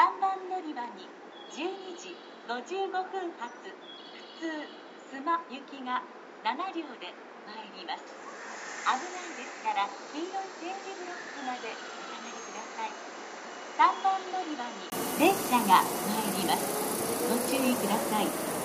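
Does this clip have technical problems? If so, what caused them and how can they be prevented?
Yes. From 0.0 to 14.92 s the sound is dull and boxy, with nothing above 7.6 kHz, a level about 10 dB lower and a different noise floor about 40 dB down. This was likely caused by the input switching to a poorer device. A spectrogram shows a flat ceiling there, and the waveform grows after a 20 ms gap at 14.92 s. Lock recording to one input device and turn off automatic device switching.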